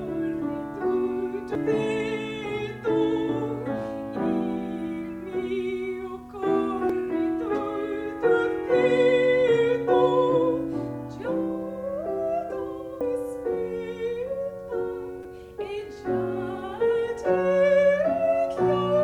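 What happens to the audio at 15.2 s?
Damaged data in a compressed stream occurs from 15.23 to 15.25 s, a disruption lasting about 20 ms. At that point part of the encoded stream was corrupted, whether through lost, zeroed or overwritten bytes or foreign data mixed in. The decoder either misreads those frames or rejects them, loses its synchronisation and hunts for the next valid frame header before playback resumes. The result is a brief break in the audio, heard as a chirp, squawk, click or short hole.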